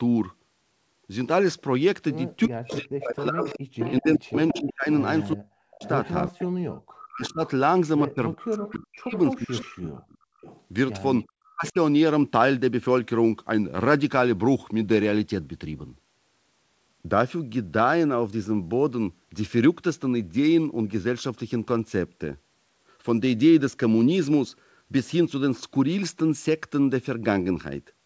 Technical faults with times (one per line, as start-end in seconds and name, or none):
2.47-10.03 speech suppressed in double talk
2.71-7.50 echo leak
8.74-11.72 echo leak
10.31-10.41 background gated by the echo canceller
11.54-11.78 speech suppressed in double talk